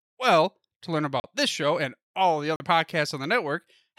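Two short holes, at 1.2 s after "to learn" and at 2.56 s after "show and all the": 40 ms blocks of digital silence, likely where the output buffer went unfilled.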